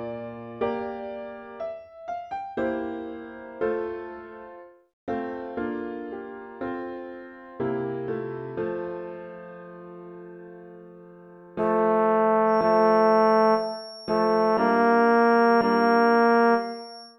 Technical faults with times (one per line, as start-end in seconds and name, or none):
12.44-17.19 feedback whistle